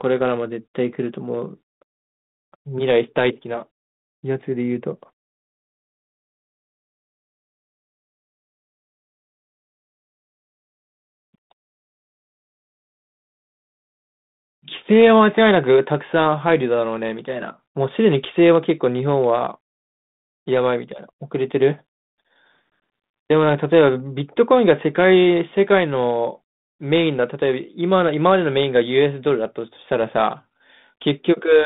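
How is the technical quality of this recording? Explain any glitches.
No glitches or faults are audible; the speech sits in a telephone band of roughly 150 Hz to 3.7 kHz, consistent with G.726 ADPCM at 32 kbit/s, whose coding leaves only light traces.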